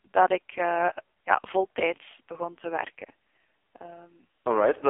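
From start to finish the speech carries the AMR narrowband mobile codec. The sound is squeezed into a phone band of roughly 250 Hz to 3.5 kHz. Nothing above 3.6 kHz survives, so sibilants lose their air. Damage is heavy. The voice turns buzzy and synthetic, as the codec rebuilds it from a vocal-tract model fed with a few pulses per 5 ms subframe. That level of degradation fits the lowest AMR-NB mode, about 4.75 kbps.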